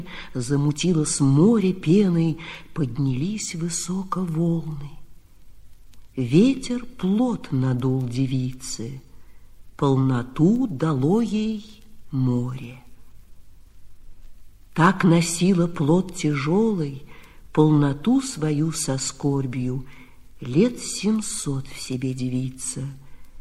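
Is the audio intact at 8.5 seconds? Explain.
Yes, the audio at 8.5 seconds plays through without any dropout, click, glitch or other audible fault.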